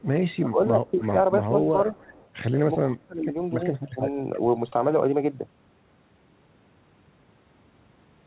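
Speech here, with a faint echo leak at 0–0.36 s, 0.89–1.08 s, 1.84–2.28 s and 2.9–2.95 s. It's a copy trailing by 312 ms, sitting about 25 to 30 dB under the talker, likely a speakerphone whose echo canceller let some far-end pickup slip back. There's also speech suppressed in double talk at 0.38–1.14 s, 1.48–1.98 s, 2.84–3.51 s and 3.88–4.03 s. The voice dips by roughly 10 to 20 dB in patches while the other side talks, likely the canceller ducking everything it couldn't separate. All of it sits on a narrowband G.711 call path that tops out at 4 kHz.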